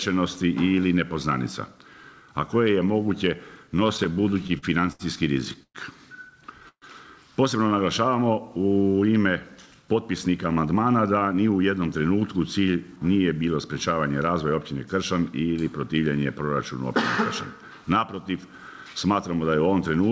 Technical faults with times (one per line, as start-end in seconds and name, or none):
3.77-5.02 repeated stalls (stutter)
5.63-5.77 call audio freeze
6.68-6.85 call audio freeze
9.56-11.58 jitter buffer speed-up